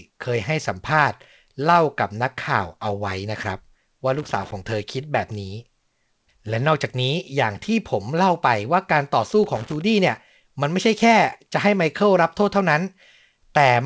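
A worn contact in the signal chain makes and breaks repeatedly, chopping the speech. This loose connector crackle bursts irregularly from 4.14 to 4.52 s and again from 9.44 to 9.81 s, over speech that the call codec cuts off above 8 kHz.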